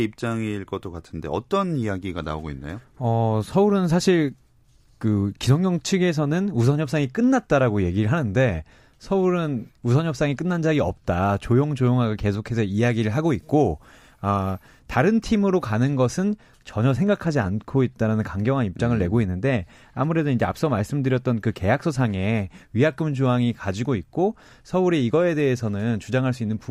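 From 12.68 to 14.80 s the speech has pre-emphasis left on: a CD-style 50/15 µs treble lift was never undone, leaving about 8 dB extra at 10 kHz, so sibilants hiss. A spectrogram shows a brighter upper band.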